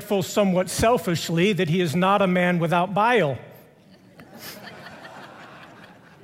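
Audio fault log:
Nothing to log here, as no faults turn up anywhere in the clip.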